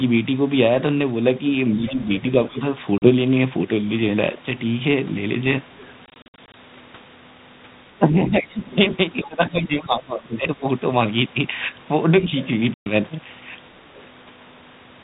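From 1.77 to 2.6 s the speech is suppressed in double talk. For roughly 300 ms within that span, the talker dips by up to about 20 dB and goes patchy. Inside the same window, from 1.87 to 2.2 s, the other side's voice leaks through, about 20 dB below the speech. The likely cause is an echo canceller that could not tell the near talker from loudspeaker echo while both spoke, so it turned the whole signal down. Unlike a dropout, the sound thins and sinks in pieces rather than leaving one hard-edged hole.

At 2.98 to 3.09 s comes packet loss on an ADPCM call. A 40 ms hole with sharp edges fits a couple of lost packets. When the speech returns, it is slightly distorted. That happens because the decoder's predictor and step size have fallen out of step with the sender's, and they take some tens of milliseconds to settle. The abrupt edges and the disturbed restart separate this from echo-canceller ducking.

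From 5.75 to 5.92 s the other side's voice leaks through again, faint at about 30 dB below the speech. This is probably residual loudspeaker echo that the canceller did not remove. It sounds like a separate second voice underneath, not a distortion of the main talker.

Between 6.06 and 6.55 s the packet loss on an ADPCM call returns, scattered rather than in one block. About 220 ms is lost over 480 ms, the longest gap is 60 ms, and roughly ten packets are gone. The speech stutters in choppy fragments, and each restart comes back slightly distorted.

From 7.99 to 10.46 s the speech is suppressed in double talk once more, for about 1.5 s in total, with drops of up to about 20 dB. At 9.23 to 9.27 s the other side's voice leaks through at about 20 dB down. The two together mark the overlap of both talkers.

At 12.74 to 12.87 s there is a 120 ms packet loss on an ADPCM call, which fits about seven packets. 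It is a clean hole followed by a disturbed restart. From 13.96 to 14.01 s the other side's voice leaks through as a faint scrap about 30 dB down. Throughout the clip, the band-limited telephone sound and light codec grain of the G.726 ADPCM coding at 32 kbit/s can be heard.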